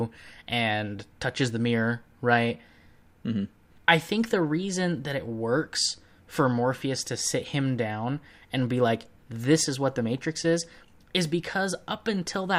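No technical faults can be heard anywhere in the speech.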